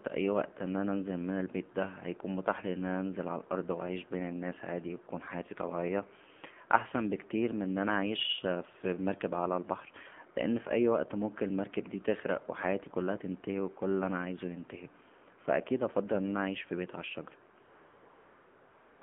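From the start to the end, the speech carries the sound of the AMR narrowband mobile codec. The audio is confined to a telephone band of roughly 150 Hz to 3.4 kHz, with nothing above 4 kHz. The codec rebuilds the voice from a vocal-tract model excited by a few pulses per subframe, and the damage is plainly audible: a buzzy, synthetic edge to the voice. The degree of coarseness points to a low mode of around 7.4 kbps.

At 17.64 s AMR comfort noise takes over and runs to 19.02 s, a span of about 1.38 s. The sender judged the talker silent and stopped transmitting speech frames, so the receiver fills the gap with noise generated from a coarse description of the background's level and spectrum. The real background gives way to a steady, smooth hiss that switches in abruptly.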